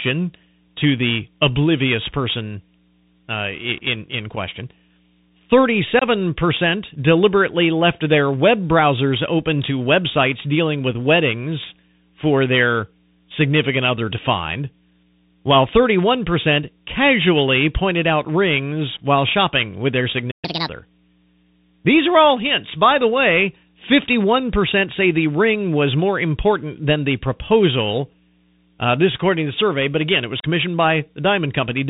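The whole recording carries plainly audible Bluetooth CVSD headset codec damage. Nothing above 4 kHz survives, s sounds turn scratchy, and a granular hiss sits under the speech. This is the signature of one-bit delta coding with an adapting step, which fits a 64 kbps CVSD link. Ordinary low-pass filtering leaves no such grain.

At 4.36 s comes the first unconcealed Bluetooth headset packet loss, a 3.8 ms hole with abrupt edges that fits a single lost packet. A second, 22.5 ms long, runs from 5.99 to 6.04 s and fits several packets in a row. Lost packets were replaced by silence or an idle pattern rather than smoothed over, which sets these gaps apart from a player stall: they last milliseconds, not a tenth of a second.

Just after "while shopping with their", the sound stops mid-flow from 20.31 to 20.45 s, a 120 ms playback stall. This is likely the player running dry or its thread being blocked. 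The silence is far longer than the packet holes, and the audio resumes afterwards rather than dropping content the way a lost packet does.

From 20.45 to 20.69 s the player catches up at higher speed, running at 1.5 times normal. Pitch rises about seven semitones along with tempo. This tied jump in speed and pitch, right after the stall, marks it as resampled catch-up rather than a codec fault.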